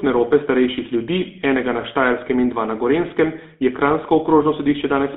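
From start to finish the speech carries GSM full-rate codec damage, plainly audible, with the buzzy, gravelly roughness that fits the 13 kbps GSM full-rate coder. The codec rebuilds the voice from a vocal-tract model excited by regular pulses, so fine detail is lost. On a spectrogram the energy is confined to roughly 200 Hz to 3.7 kHz, with empty bands below and above, and the harmonics look smeared and grainy rather than cleanly striated.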